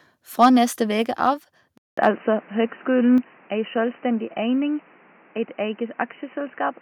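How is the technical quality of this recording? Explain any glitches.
The recording has clear technical problems: two clipped peaks, a switch to a narrower-band input, and two abrupt level drops.

Microphone overload at 0.42–0.48 s and 2.03–2.09 s: peaks exceed the converter's limit by about 3 dB, likely from excessive input gain. Their tops are flattened, producing a harsh crackle.

Input switched to a poorer device at 1.78 s: after a 200 ms gap, the band narrows. The speech turns dull and boxy, with a level change of about 5 dB and a new noise floor roughly 30 dB down. This is likely a change to a lower-grade microphone or headset profile.

Microphone volume stepped down at 2.16 s by about 2 dB and at 3.18 s by about 5 dB: speech and background drop abruptly, likely from the call software cutting input gain after clipping.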